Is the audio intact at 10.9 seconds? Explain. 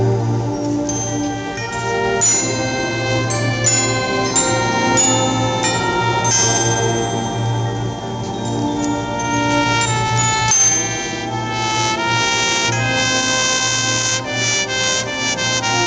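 No. At 10.9 seconds the audio has gain pumping, which runs through the whole clip. The level swings by around 10 dB, so loud and quiet parts sit squashed together. The likely cause is gain set far too high feeding a fast limiter or compressor. Unlike a noise gate, the background never drops to silence.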